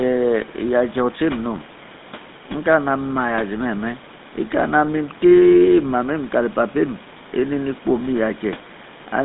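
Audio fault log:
throughout, GSM full-rate codec: the speech was coded with the original GSM codec, which rebuilds excitation from pulses spaced three samples apart, as its 13 kbps sound suggests. This gives a plainly audible buzzy, gravelly roughness, with the line band held to 150 Hz to 3.7 kHz and nothing above 3.8 kHz.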